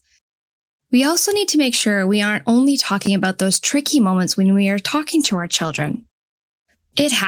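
Around 3.05 to 3.07 s, just after "sure we aren't only" and before "about those tricky moments", there is a brief jumbled flicker. This is chunks out of order: one short slice of audio, about 10 ms long, played one slot later than it should, so the slice that belonged after it came first. Nothing is lost, but the swapped pieces leave hard joins.

From 5.23 s, starting after "when we are talking" and lasting to the end of the clip, the speech turns rough and muffled, with a watery edge and duller highs. This is a call bitrate drop. The bandwidth estimate fell, so the encoder was given far fewer bits and coded the sound more coarsely, trimming the top end. The degradation points to a fall from about 32 to 13 kbps, with the worst stretch lasting about 1.2 s.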